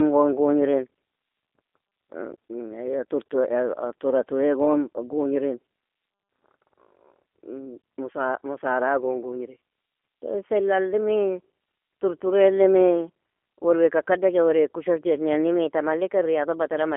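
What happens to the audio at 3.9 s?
At 3.9 s the speech sounds thin, boxy and plainly buzzy and synthetic, with nothing above 3.4 kHz. This is G.729 codec damage, present throughout the clip. The sound is rebuilt from a vocal tract filter, a pitch predictor and sparse pulses, which fits 8 kbit/s G.729A.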